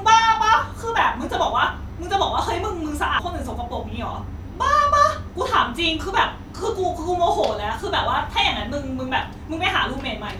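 Speech recording with a CD skip at 3.19 s: a brief tick and a near-silent dropout of a few milliseconds, after which the audio resumes from a different point on the disc. A knock or surface flaw threw the laser onto another turn of the spiral, so the playback jumps abruptly.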